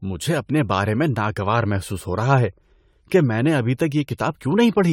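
Generation loss runs through the whole speech clip. The sound is swirly, smeared and hollow, and attacks blur. It likely went through about ten AAC encode-decode passes at 96 kbit/s. Each pass requantised on a shifted frame grid. Nothing remains above 19.8 kHz.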